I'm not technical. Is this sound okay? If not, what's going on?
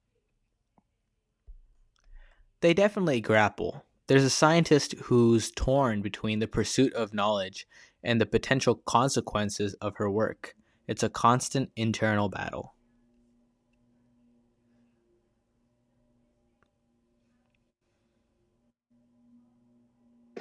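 Yes, nothing in this recording points to a technical problem with the signal.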